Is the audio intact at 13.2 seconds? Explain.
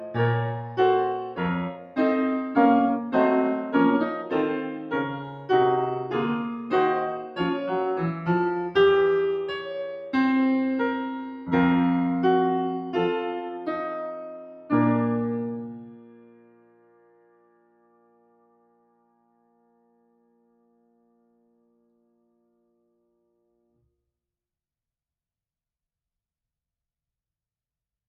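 No, at 13.2 s the music pumps and thins, held notes and tails sinking about 10 dB: a noise suppressor applied to music, active throughout, mistakes sustained tones for noise.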